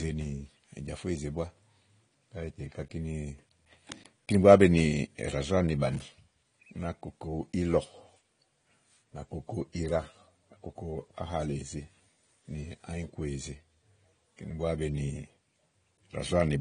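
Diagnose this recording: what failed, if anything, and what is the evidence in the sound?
The speech sounds dull and smeared throughout, with nothing above about 10.1 kHz and a plainly audible warbling, fizzy texture on sustained sounds and sibilants. At the codec stage, this is likely AAC compression, its missing top band and quantisation damage fitting AAC-LC at around 32 kbps.

From 3.92 to 4.09 s a dense, uneven scratching burst rides over the speech, roughly 20 dB below it. In the analogue wiring, this is likely cable scratch noise, a worn cable or connector shifting and rapidly changing its contact resistance.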